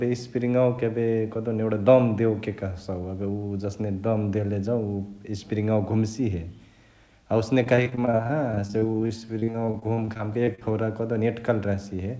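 Speech over a G.722 call path, with nothing above 8 kHz, suffers repeated packet loss (robotic sound) from 7.64 to 10.63 s. Dozens of short holes, none longer than 41 ms, are patched by stretching the preceding sound, which gives choppy sound with pieces missing rather than one clean silent dropout.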